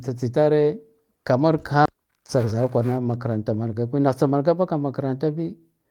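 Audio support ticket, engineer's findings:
Skip ahead at 1.85–1.87 s. Speech jumps forward with no gap. About a second of audio is missing, and the two sides are joined directly. Probable component: jitter buffer or network path. Buffered audio was dropped and playback resumed later.

Jitter buffer speed-up, 2.43–2.86 s. Speech runs at 110% speed with pitch unchanged and sounds hurried. Probable component: jitter buffer. It was overfilled, so short pitch-period pieces were trimmed repeatedly, removing around 50 ms in total.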